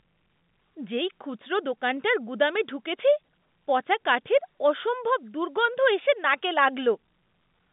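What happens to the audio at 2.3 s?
Nothing goes wrong at 2.3 s: the speech passes through intact, carried in the same narrow telephone band, capped at about 3.7 kHz, that it has throughout.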